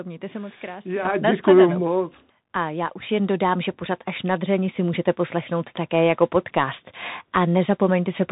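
From the start, the speech carries the Bluetooth CVSD headset codec. The one-bit delta coding leaves nothing above 4 kHz, scratchy s sounds, and a granular hiss beneath the speech, which fits a 64 kbit/s CVSD link. That grainy slope distortion sets it apart from a plain narrowband filter.

At 1.05 s, just after "mějte se moc krásně", the microphone volume is stepped up by about 9 dB. At 3.09 s, between "já už" and "jen dodám že pořád", it rises by about 5 dB. At 6.15 s, after "si můžete poslechnout také", there is a smaller step of about 1 dB. Each time the device's input volume was raised in a single jump. Speech and background noise get louder together and stay there. Unlike compressor pumping, the level never drifts back down.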